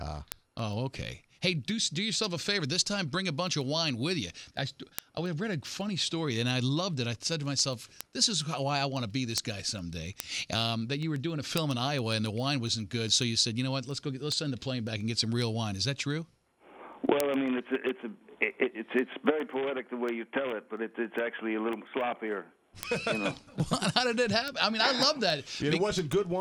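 From 0.18 s to 26.4 s, the receiving device runs on its own clock, unlocked from the sender's and off by roughly 150 ppm, so a single sample slips about every 0.15 s. These word clock ticks form a steady stream of sharp clicks throughout.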